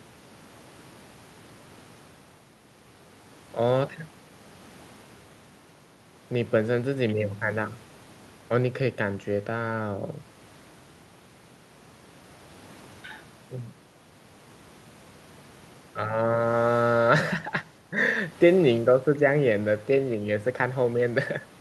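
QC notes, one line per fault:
Nothing to flag here; the speech came through without a single technical problem that needed noting.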